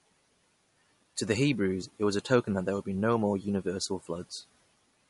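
Throughout the speech, the sound is likely damaged by MP3 compression: nothing remains above 11.2 kHz, and weak frequency lines switch on and off between frames, giving a plainly audible watery, swirly texture, which fits a low bitrate around 48 kbps.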